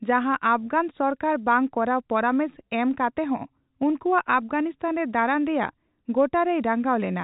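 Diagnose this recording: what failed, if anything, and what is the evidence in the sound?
Nothing in this speech recording points to a failure at any stage. It carries the sound of a working G.711 telephone path, with the band closing off near 3.8 kHz and the codec's quantisation noise at most faint.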